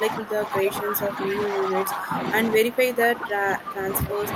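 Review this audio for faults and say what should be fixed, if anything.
Speech suppressed in double talk runs from 0.0 to 2.3 s and again from 2.6 to 4.36 s. The level dips by about 10 dB in the first stretch and about 15 dB in the second. The likely cause is an echo canceller that could not tell the near talker from loudspeaker echo while both sides spoke. It pulled everything down together. Prevention: tune the canceller's double-talk detection so near-end speech keeps full level during overlap.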